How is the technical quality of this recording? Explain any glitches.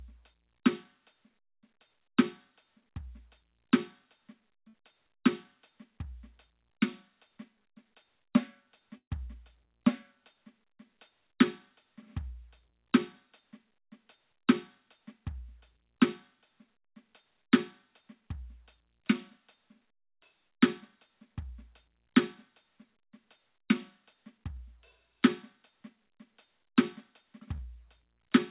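It's a call recording of music with three dropouts. Everything stops at 4 kHz, which fits a narrowband call codec like G.711 A-law.

At 4.68 to 4.75 s and 8.97 to 9.12 s there are bursts of packet loss. The receiver stretches the last sound, about 54 ms and 130 ms of it, and fades it out. The second one goes silent for about 90 ms before the music jumps ahead.

At 27.56 to 27.60 s there's a short concealed packet loss. About 18 ms is patched from the preceding sound and blended back, so you hear a quick smear.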